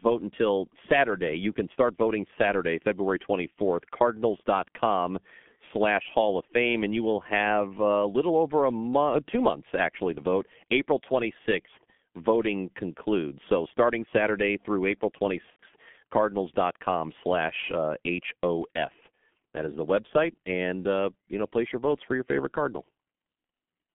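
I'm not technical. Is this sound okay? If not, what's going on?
No. The whole clip went through the G.723.1 codec, an old internet-phone system that squeezes speech very hard and keeps only the middle of the phone band, up to about 3.4 kHz. That leaves the speech muffled and hoarse throughout, with smeared, indistinct consonants.

From 15.50 to 15.59 s, about 90 ms of audio never arrived. This is VoIP packet loss concealed by the speech codec, consistent with three lost 30 ms chunks. The decoder filled the gap by stretching the last bit of speech into a fading sound, so the voice briefly blurs and thins there.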